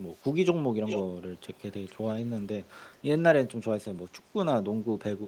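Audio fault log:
0.16 to 2.98 s, echo leak: delayed copies of the speech surface at 0.16–0.23, 0.85–1.02, 1.38–1.62, 1.86–2.47 and 2.78–2.98 s, each trailing the original by 446 ms. Most are very faint, around 40 dB down; the 1.86 s stretch is about 30 dB down, and the 0.85 s scrap is nearly as loud as the speech, only about 5 dB below. Likely a far-end loudspeaker's echo canceller letting residue through. A spectrogram shows ghost harmonic patterns shifted 446 ms right, and the waveform shows a second envelope at 0.85 s.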